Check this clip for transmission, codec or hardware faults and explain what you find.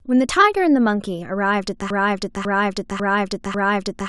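From 1.9 s to the end, a broken-record loop takes over: a 0.55 s fragment of speech repeats exactly, back to back, four times, and the audio due in that stretch never arrives. The likely cause is a stalled player or stream resending its last buffer. On a waveform or spectrogram, identical 0.55 s blocks tile side by side.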